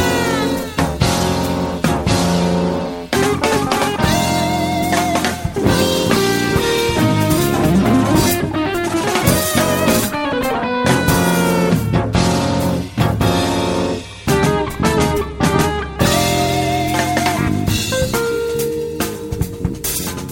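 No technical faults can be heard anywhere in this recording.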